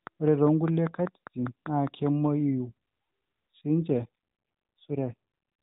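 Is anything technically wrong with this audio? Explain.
Yes, two faults stand out in this speech clip, which comes through an AMR-NB mobile path with its 4 kHz upper limit.

From 0.07 to 2.08 s there is a train of clicks, likely from interference from nearby equipment or a faulty connection or power supply. It injects about ten near-identical pulses at a steady five per second, peaking around 10 dB above the speech, heard as regular ticking throughout, pauses included.

From 3.90 to 5.14 s there is an AMR rate drop. The network pushed the codec from 12.2 kbps down to 5.9 kbps, moving bits into error protection. The bandwidth stays the same and nothing cuts out, but the speech turns rougher and buzzier before recovering.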